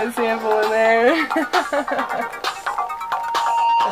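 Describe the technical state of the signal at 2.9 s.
At 2.9 s a loudspeaker feedback squeal is under way. It starts at 2.61 s and runs to the end. A single 930 Hz tone swells over about a second to roughly 5 dB above the sound as the mic-to-speaker loop's gain exceeds one. Unlike a steady interfering tone, it grows by itself.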